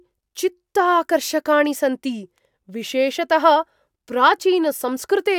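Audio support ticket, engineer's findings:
Nothing to flag on this speech recording; I listened to the whole thing and didn't hear any technical problem worth chasing.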